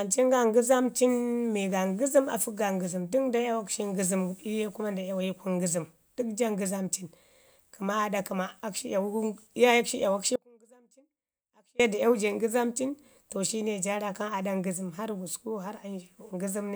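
At 10.36 s the speech cuts out abruptly and stays gone until 11.80 s, roughly 1.44 s, returning on "ye da iyawu ja". This is an audio dropout to a faint residue: through the gap only a faint trace of the sound remains, around 35 dB below normal level, rather than true silence. The likely cause is the wanted signal being lost upstream while the path after the break stayed live. The hard edges at both ends distinguish it from a pause or fade.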